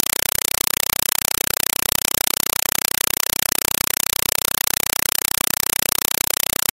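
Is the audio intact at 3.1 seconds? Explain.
No. A compressed stream is being played as audio throughout. Undecoded AC-3 data gives loud chattering static: 4 ms noise bursts repeating at 31.25 Hz.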